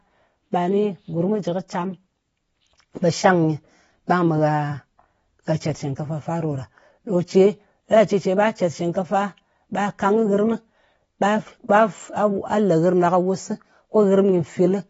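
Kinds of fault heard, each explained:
AAC compression: The speech sounds dull and smeared throughout, with a warbling, fizzy texture on sustained sounds and sibilants, and nothing above 7.6 kHz. The likely cause is heavily quantised AAC-LC coding that fits a bitrate around 24 kbps, with a lowered cut-off.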